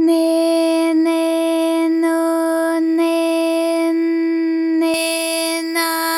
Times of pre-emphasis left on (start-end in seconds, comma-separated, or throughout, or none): 4.94-6.18